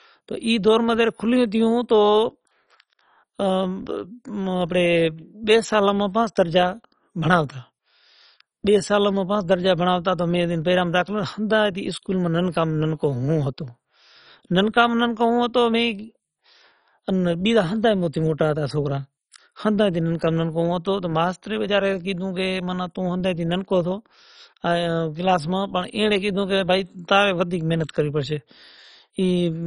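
Throughout the speech, the audio is dull and gurgling, with granular distortion. This is likely MP2 compression starved of bits, fitting roughly 32 kbps. A spectrogram shows nothing above 10.4 kHz and upper sub-bands flickering on and off as coarse, blocky patches.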